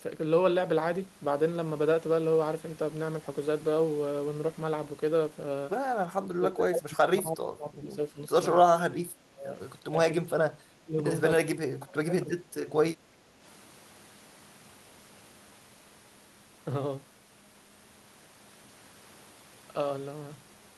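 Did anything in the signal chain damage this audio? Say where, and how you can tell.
Yes, it's the call processing. The speech dips hard in four stretches: 6.3–8.37, 8.63–9.54, 9.87–11.04 and 11.37–12.68 s, each falling by something like 25 to 30 dB. That's likely speech suppressed in double talk, where the echo canceller couldn't separate the talker from loudspeaker echo and ducked both.

Right after, from 12.97 to 13.41 s, the room sound drops by about 6 dB for just under half a second and then comes back. That's background gated by the echo canceller: it clamped the mic down while the far end played, then released.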